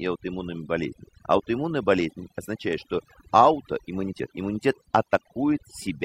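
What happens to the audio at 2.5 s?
At 2.5 s the background is pulled down and broken up into twinkling specks. This is overdone noise removal, and it runs through the whole clip rather than starting at this point. A noise reduction stage set far too aggressively is cutting individual frequency bands hard whenever their level sits close to its noise estimate, so the quieter parts of the voice are stripped away along with the noise.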